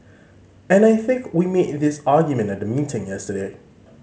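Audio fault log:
No fault to log.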